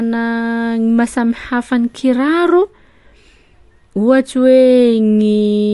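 Speech runs through likely MP3 compression from start to finish: starved of bits, the encoder has cut the treble, leaving nothing above 11.3 kHz, and switches weak frequency lines on and off between frames, giving a plainly audible watery swirl and smeared attacks consistent with roughly 48 kbps.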